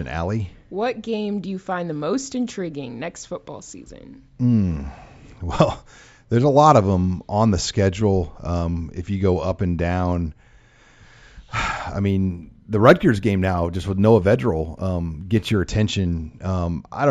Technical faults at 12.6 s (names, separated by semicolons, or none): imaging from linear upsampling